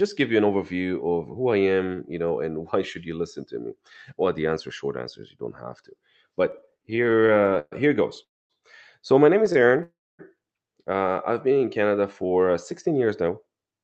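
Speech passed over a call link whose packets twice arrived late or more slowly than they were played, so the jitter buffer kept running empty: repeated stalls (stutter) from 6.51 to 7.74 s, with 22 short gaps filled by continuing the last sound (the longest 121 ms, about 28% of that stretch), and again from 9.46 to 9.81 s right after "my name", with 5 gaps of up to 23 ms. Both passages drag and stutter, though nothing is lost. Two call audio freezes, at 8.24 to 8.52 s and 9.83 to 10.21 s, are likely from packets held up in transit. The sound briefly carries on and then drops to near silence, for about 240 ms and 250 ms, before resuming where it stopped, so the audio falls 259 ms and then 359 ms further behind. At 11.33 to 11.67 s a jitter buffer slow-down rebuilds its reserve by repeating single pitch periods, adding 54 ms, so the speech runs at 87% speed at unchanged pitch and sounds drawn out. 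At 13.28 to 13.79 s a jitter buffer speed-up trims about 70 ms of surplus delay, and the speech runs at 110% speed and sounds hurried. Throughout, the Opus call codec's coding noise and a top end limited to 8 kHz are present, at a bitrate of 40 kbps.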